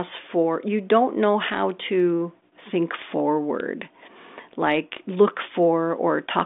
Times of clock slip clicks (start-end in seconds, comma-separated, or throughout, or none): 0.18-6.23